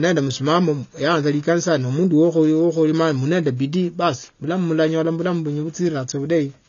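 AAC compression damage runs through the whole of this speech clip and is plainly audible. Nothing reaches above about 6.9 kHz, so the sound is dull and muffled, and sibilants and sustained vowels take on a smeared, warbling, fizzy texture. The likely cause is AAC-LC encoding at a bitrate low enough, which fits around 24 kbps, that the encoder lowers its cut-off and quantises the remaining bands too coarsely to keep their detail.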